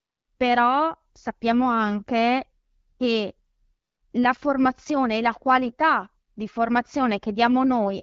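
No technical faults occur at any point in the speech, which comes through the AMR wideband (HD Voice) codec at 12.65 kbit/s.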